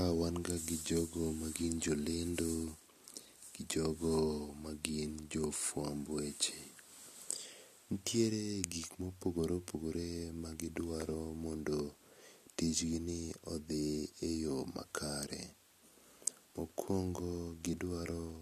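No technical faults can be heard anywhere in this speech recording. Nothing in it points to a problem with how the sound was captured, processed or delivered.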